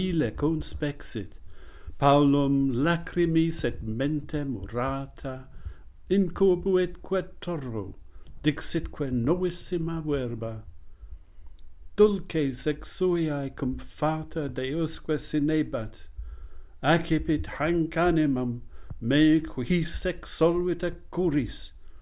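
Nothing goes wrong anywhere in the audio, so there's no technical fault to point to at any moment.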